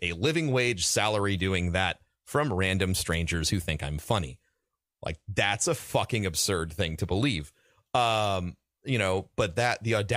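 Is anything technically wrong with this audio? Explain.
Yes. At 2.53 s there are dropped samples: the stream likely lost a single sample, so the waveform jumps abruptly to a later value, heard as one sharp click.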